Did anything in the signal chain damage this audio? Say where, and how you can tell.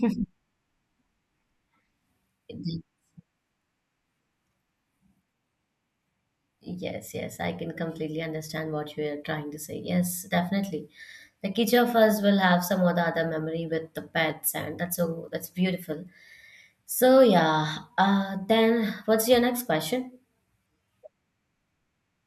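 No, nothing in the signal chain damaged this audio.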